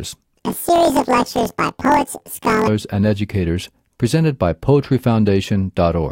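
From 0.38 to 2.69 s, just before "and educators presented by", planar audio read as interleaved jumps the speech an octave high with a 43 Hz flutter. Each 23 ms block, which fits a 1024-sample block, plays twice at double speed, so unlike a sped-up recording the overall pace stays correct.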